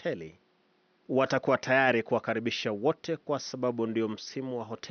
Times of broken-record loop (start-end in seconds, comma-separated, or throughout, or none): none